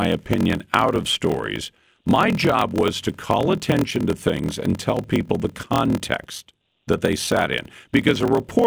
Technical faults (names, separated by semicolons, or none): block size mismatch (padded)